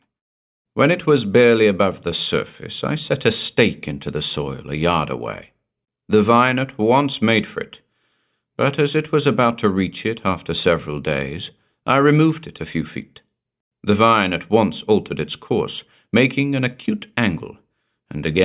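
No technical faults are audible anywhere in the speech recording.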